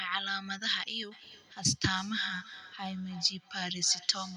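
From 1.12 s through to the end, the speech is shadowed by a delayed copy of itself, each word returning roughly a third of a second later and peaking at about 15 dB below the direct speech. This is feedback echo between two devices: a second device in the same room on the same call plays back this microphone's audio, the microphone captures it again, and the local echo canceller ignores it because it only removes its own device's playback.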